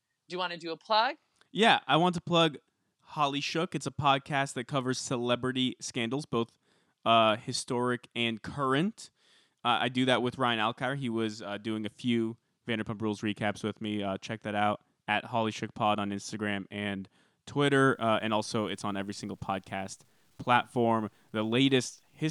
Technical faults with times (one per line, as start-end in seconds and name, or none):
17.85-22.30 low bit depth without dither